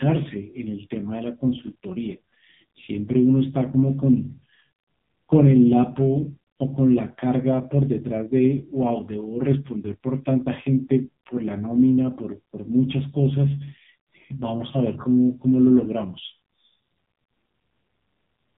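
Throughout, the speech sounds buzzy and synthetic and stops dead above 3.8 kHz: heavy AMR narrowband mobile codec damage, consistent with its low 5.9 kbps mode.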